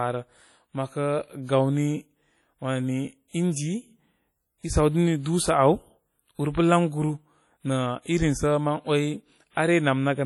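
Throughout the speech, the sound rings and smears, with a washy hiss that rises and falls with the signal. This is heavy damage from likely WMA compression, fitting about 32 kbps. A spectrogram shows blotchy gaps where weak detail was dropped, and nothing above 20.1 kHz.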